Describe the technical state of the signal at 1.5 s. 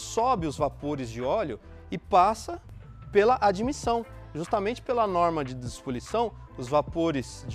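At 1.5 s the signal is intact, with no dropout, distortion or other fault audible there.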